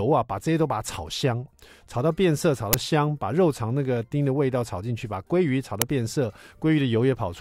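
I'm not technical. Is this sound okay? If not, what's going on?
No. There are two brief, harsh bursts of noise, at 2.73 s and 5.82 s. This is an uninitialised buffer fault. The system played a chunk of memory before any real audio had been placed in it, so leftover data came out as loud digital noise.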